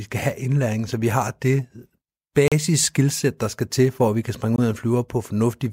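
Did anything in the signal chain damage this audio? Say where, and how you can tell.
Yes, two blocks of digital silence in this speech: at 2.48 s for about 38 ms and at 4.56 s for about 21 ms. Each drops hard to silence and back. That's the driver or buffer stage missing its deadline; the second gap fits a 1024-sample buffer.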